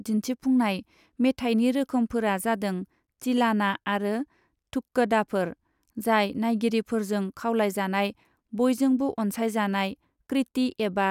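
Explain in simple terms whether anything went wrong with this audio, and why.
Nothing went wrong with it.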